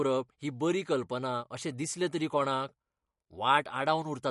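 From start to end, the speech has a watery, swirly quality with smeared consonants, likely MP3 compression at a rate that fits about 48 kbps. A spectrogram shows a flat ceiling at 11.2 kHz and weak bands flickering on and off between frames.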